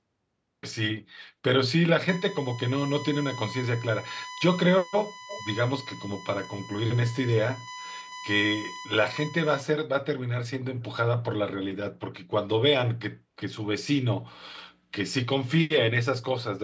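USB whine runs from 2.08 s to 9.61 s as a steady, fixed-pitch tone at 1 kHz, sitting only around 10 dB below the speech. It comes from the USB bus drawing current in regular 1 ms frames. That pulsing load leaks into the audio through the power or ground connection, so the 1 kHz frame rate becomes an audible whine. The tone holds its pitch throughout.

An echo leak appears between 5.27 s and 5.41 s: a brief, faint repeat of the speech arriving 343 ms late, at about 15 dB below the original. The likely cause is a far end playing the call over a loudspeaker, where the echo canceller failed to fully remove what its microphone picked up and sent a delayed scrap back. It overlaps the whine, and like the rest of the audio it has nothing above 8 kHz, which fits normal call microphone processing.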